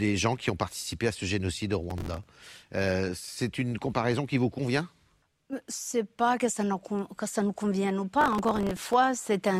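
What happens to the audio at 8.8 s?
Processor overload crackle runs from about 8.21 s to 8.93 s, so 8.8 s falls inside it. The processor falls behind and misses a long run of its short buffer deadlines, something like thirty of them, with the grain fitting buffers of roughly 3 ms. Each missed slot is filled with a stale piece of earlier audio, hard-edged at both ends, so the speech is overlaid by a gritty crackle that ends when the overload clears.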